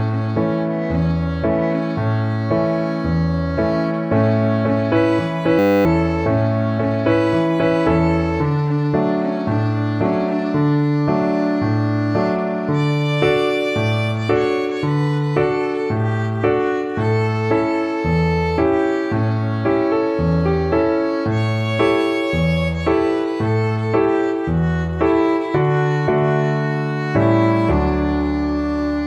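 At 5.59 s the audio hits a system hang loop and turns into a steady 100 Hz buzz until 5.85 s. A 10 ms slice repeats a couple of dozen times while the system stalls and the hardware keeps replaying a tiny ring buffer. Roughly a third of a second of real audio is lost.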